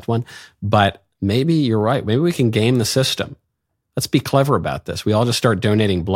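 Nothing goes wrong anywhere in this recording of speech; there's no dropout, glitch or distortion to point to at any moment.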